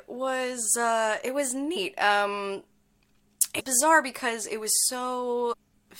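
Compressed frames skipped at 1.75 s after "was uh it was", 3.59–3.61 s before "bizarre because it", and 5.52–5.54 s: the audio jumps ahead by roughly 0.1, 0.2 and 0.3 s.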